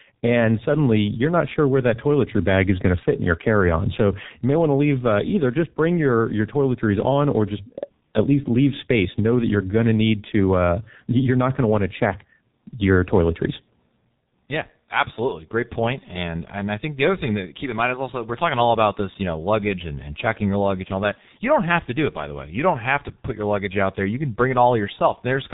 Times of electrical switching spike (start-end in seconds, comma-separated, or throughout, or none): none